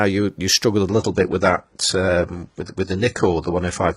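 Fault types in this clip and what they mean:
Adaptive stream at a lower bitrate: at 0.89 s the speech jumps, with no gap, to a thinner, lower-quality version lasting to the end, with nothing above 11.1 kHz and a synthetic top, which fits a drop from 96 kbit/s AAC to 12 kbit/s HE-AAC.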